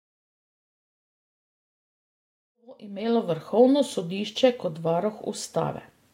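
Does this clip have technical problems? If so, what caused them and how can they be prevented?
No, nothing stood out on listening to this speech clip, and the smooth fade-in that rises from around 2.5 s to full level by 3.62 s sounds like an ordinary editing choice rather than a problem.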